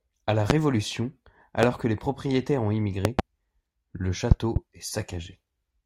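Loud pops hit at 0.50 to 0.53 s and 1.63 to 1.66 s, just before "que les propriétaires ont". Double pops follow at 3.05 to 3.22 s and 4.31 to 4.59 s. Each jumps roughly 20 to 25 dB above the speech. A sudden voltage step, likely static or a switch, causes them. The speech carries on underneath.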